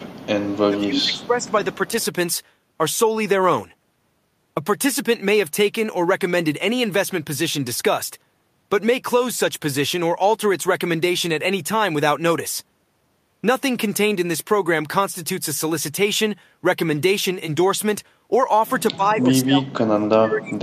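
From the start to 0.28 s and again at 0.51–0.57 s, a faint copy of the speech trails the original by 225 ms, about 25 dB down. This is an echo leak, likely a far-end loudspeaker whose echo canceller let part of the pickup return. Between 0.69 and 1.52 s the voice sinks by up to about 15 dB over most of that stretch. Fainter echo scraps, about 30 dB down, appear at 1.15–1.26 s, 1.42–1.46 s and 1.73–2.05 s. A slight dip of about 5 dB follows at 1.88–1.93 s. From 18.93 s to the end the speech is cut much harder, by up to about 35 dB. These dips are speech suppressed in double talk, likely the canceller ducking the talker while the other side spoke over them.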